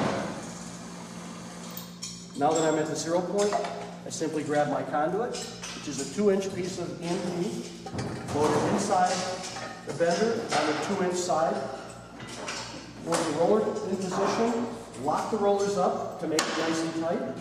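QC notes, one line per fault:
Nothing stood out on this one, so there's nothing to log.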